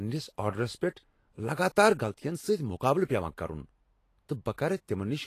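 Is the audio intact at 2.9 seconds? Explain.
No. At 2.9 s, as throughout, the speech is hissy and grainy with nothing above 14.2 kHz, likely Vorbis compression quantising treble into noise; a plain low-pass would stay clean.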